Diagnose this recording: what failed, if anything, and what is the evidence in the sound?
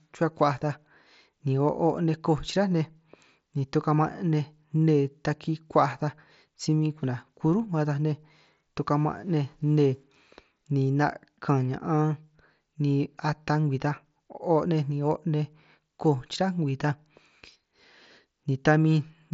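Nothing failed in this speech recording; no stage in the chain shows a fault. The sound carries the signature of a Bluetooth mSBC headset codec working as intended: the band stops at about 7.7 kHz, with a light grain on the louder passages that is consistent with a fixed bit pool giving about 61 kbps.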